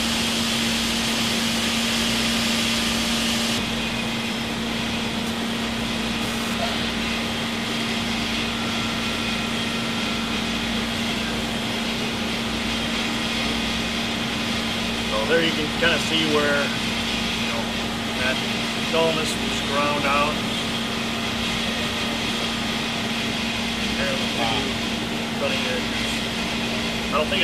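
From 5.27 to 6.54 s there's GSM phone buzz: a raspy 217 Hz burst about 10 dB under the sound, from a nearby 2G phone doing a data transfer.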